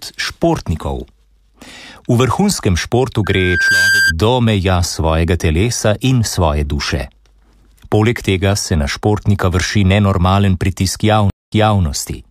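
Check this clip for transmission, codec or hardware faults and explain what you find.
Two faults are audible. From 3.24 to 4.13 s there is loudspeaker feedback squeal: a 1.6 kHz loop tone swells over roughly half a second to about 5 dB above the audio. Unlike a steady interference whistle, it grows by itself.

From 11.30 to 11.81 s there is a stream reconnect: 0.2 s of silence, then playback resumes 0.31 s earlier as a fresh decoder starts. The repeated material, not just a gap, separates it from a simple dropout.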